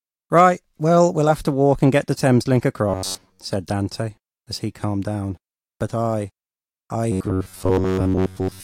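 From 2.89 to 3.40 s, and from 7.12 s to the end after "I I", robotic sound from repeated short buffers takes over: a rigid, metallic buzz at 93.8 Hz, likely an 11 ms chunk replayed for most of that time. Unlike hum, it replaces the speech.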